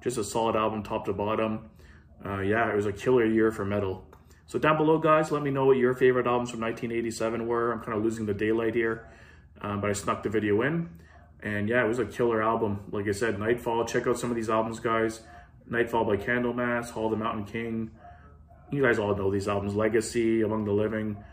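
No technical faults are audible.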